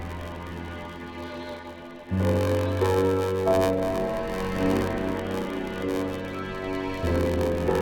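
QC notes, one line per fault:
Throughout: block size mismatch (padded). A steady buzz at about 94 Hz sits under the whole clip. One stage hands over shorter blocks than the next one reads, so each block ends in a short stretch of zeros. Those silent gaps repeat at the block rate, and that repetition is the buzz. The 94 Hz rate fits a 512-sample read block. The gaps also stretch the timeline, so the audio runs at about 0.86 times normal speed with its timbre unchanged.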